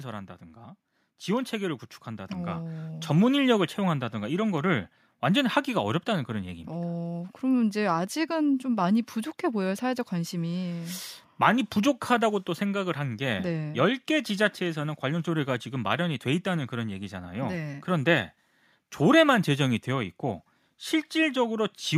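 A speech recording with two automatic gain control faults. From 0.39 to 3.08 s there is automatic gain rising: the level climbs by about 9 dB over nearly three seconds, and because the gain stage has judged the input too quiet, the voice and the room noise behind it swell up together. Right after, from 3.31 to 9.02 s, automatic gain falling sets in. The controller now finds the input too loud, or its background noise too strong, and pulls the gain back by about 3 dB over more than five seconds, so speech and background sink in step.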